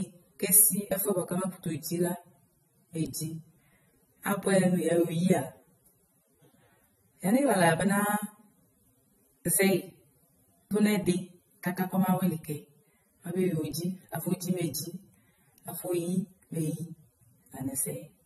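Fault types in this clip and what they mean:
transcoding between lossy codecs: speech with nothing above 12.6 kHz throughout, likely a low-bitrate AAC encode later re-encoded as Vorbis, stacking both codecs' artefacts.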